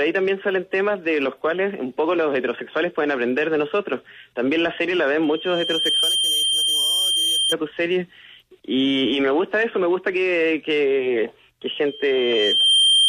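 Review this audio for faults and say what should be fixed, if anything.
Loudspeaker feedback squeal at 5.22–7.55 s and 11.87–13.09 s: a 3.2 kHz tone swells over roughly a second, the second time slightly above the programme, as the microphone re-amplifies its own loudspeaker. Unlike a steady whistle, it grows. Reduce gain or notch 3.2 kHz.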